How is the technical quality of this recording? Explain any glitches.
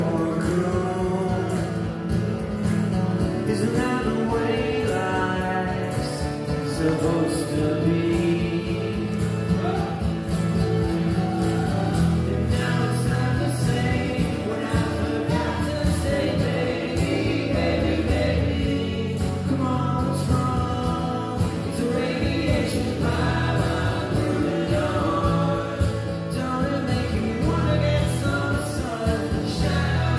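No glitches can be heard anywhere in the recording, and the signal stays continuous and stable throughout, with no technical faults to explain.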